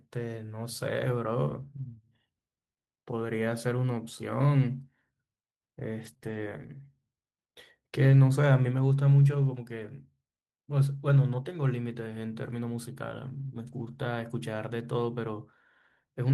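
Around 6.01 to 6.11 s the speech turns briefly rough and grainy without any gap. This is a lost packet rebuilt from error correction: packets went missing, and the decoder played the lower-bitrate copies carried inside the following packets. About 60 ms of rebuilt audio fits a run of roughly three 20 ms frames. The same coarse, noisy patch recurs at 6.21 to 6.39 s, at 8.09 to 8.19 s, at 9.79 to 9.85 s, and longest at 13.67 to 13.97 s.

Between those first two rough stretches, at 6.13 to 6.17 s and again at 6.17 to 6.21 s, the sound smears and wobbles for an instant. This is short concealed packet loss: about 20 ms each time arrived too late or not at all, and the receiver filled the hole by extending the preceding sound, either from its pitch or as shaped noise, before blending back into the real signal.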